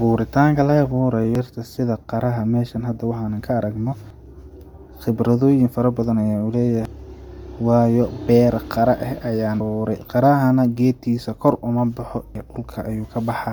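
Throughout the clip the speech has passed through a transform codec working in short frames, likely Bluetooth LC3 compression. At this rate the encoder cannot code the whole upper spectrum, so it zeroes parts of it and fills them with synthetic noise. The result is a plainly audible breathy, grainy edge on the speech. The character fits LC3 at around 48 kbps with 10 ms frames, and nothing is present above 20.1 kHz.

Audio missing between chunks, likely from a recorder or processor that drops a piece of signal each time it closes one block and opens the next, causes skips at 1.35, 4.10, 6.85, 9.60 and 12.35 s. Each lost stretch is about a third of a second, and the two sides are butted together with no silence, so the speech jumps forward abruptly. The gaps fall after "khibradooyin fara badan ayan" at 6.85 s and after "beera qara ah ayaan" at 9.60 s. The regular spacing fits a 3 s chunk.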